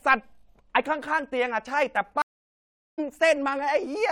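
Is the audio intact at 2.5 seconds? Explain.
No: the speech cuts to 760 ms of silence from 2.22 to 2.99 s and resumes roughly 0.7 s later, a stream reconnect restarting the decoder.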